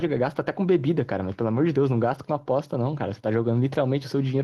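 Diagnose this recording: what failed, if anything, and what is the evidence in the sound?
Nothing failed in this recording.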